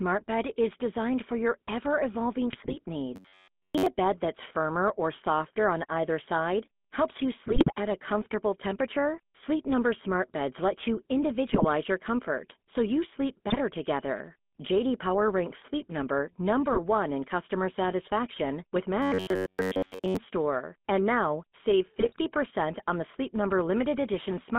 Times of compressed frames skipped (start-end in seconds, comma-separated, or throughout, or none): none